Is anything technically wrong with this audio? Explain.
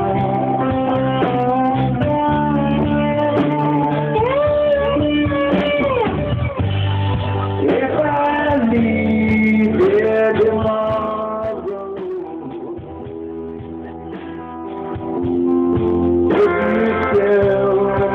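Yes, there's zipper noise from 10.50 to 12.03 s as the level drops by about 10 dB, and again from 14.49 to 15.56 s as it rises by about 10 dB. The gain moves in coarse unsmoothed steps, roughly twenty a second, so each jump clicks and you hear a fast ticking on top of the fade.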